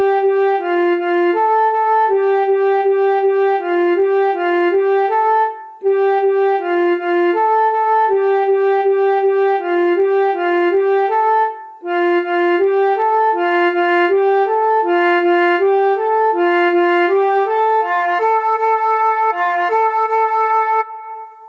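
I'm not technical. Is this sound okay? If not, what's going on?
No. Throughout the clip there's gain pumping: loud and soft parts end up closer in level than they should be, so the sound comes across squashed. The likely cause is a microphone turned up far too high, with an automatic limiter pulling it back down.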